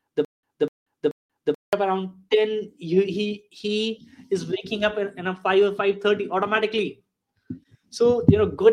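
Speech clip with a stutter with silent gaps: the stream likely stalled, so from 0.0 to 1.73 s a 248 ms fragment repeats three times, each followed by 184 ms of digital silence.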